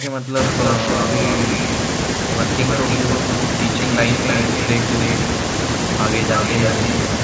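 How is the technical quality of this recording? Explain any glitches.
The recording has two call-related glitches, one at the very start and one near the middle.

From 0 to 0.38 s, the speech dips sharply, by roughly 25 dB at its deepest. This is likely speech suppressed in double talk. Both sides spoke at once. The echo canceller could not tell the talker from loudspeaker echo, so it turned everything down.

From 3.94 to 4.45 s, a delayed copy of the voice appears about 314 ms behind the original. It sits only a few dB below the speech. This is likely an echo leak. A loudspeaker on one side fed its microphone, and the canceller let some through. The sound stops at 8 kHz, as expected from call processing.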